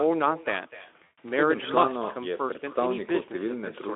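Echo with no canceller runs throughout the clip. The far end is playing the call over a loudspeaker, its microphone picks that sound back up, and nothing removes it, so the talker's own speech returns after the network round trip. Each phrase is trailed, roughly a third of a second later, by a copy about 15 dB quieter that sounds thinner, shadowing the first.

VoIP packet loss concealed by the speech codec occurs from 1.03 to 1.18 s. About 140 ms of audio went missing, which fits seven lost 20 ms frames, and the decoder filled the gap by extending its last pitch and spectral shape while lowering the gain frame by frame. That stretch turns into a buzzy, smeared tone or coloured noise that fades, and because each rebuilt frame leans on the one before, the speech sounds weak or distorted just after packets resume. The Speex coding around it adds only light coding damage within the narrow telephone band.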